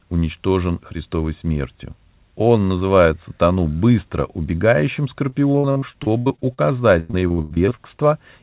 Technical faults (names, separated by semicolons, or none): repeated packet loss (robotic sound)